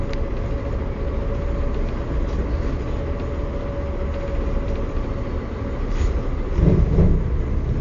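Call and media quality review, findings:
Dull, band-limited sound throughout, nothing above 7.1 kHz, with plainly audible codec smearing and warbly, fizzy texture. Likely AAC compression (AAC-LC) at a low bitrate, consistent with 32 kbps. Unlike a plain low-pass filter, the in-band detail is also damaged.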